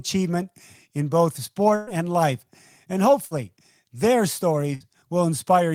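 Bursts of packet loss hit at 1.75 to 1.90 s, between "in both" and "and life", then at 3.25 to 3.34 s and 4.75 to 4.83 s. Packets arrived too late or not at all. The receiver stretched the last sound and faded it. About 120 ms, then 60 ms twice, are skipped.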